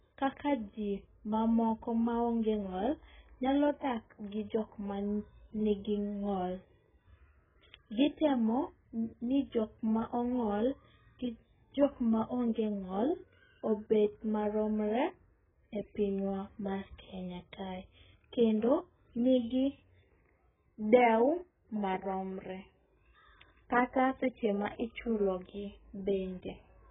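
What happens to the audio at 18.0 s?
At 18.0 s the speech sits inside damage that runs through the whole clip: nothing is present above 3.8 kHz, and sibilants and sustained vowels have a smeared, warbling, fizzy texture. The likely cause is heavy AAC compression, AAC-LC at a very low bitrate, around 8 kbps. The encoder quantises its frequency lines so coarsely that it drops the upper band, leaves spectral holes, and fills some bands with substitute noise, which makes the sound dull and unstable.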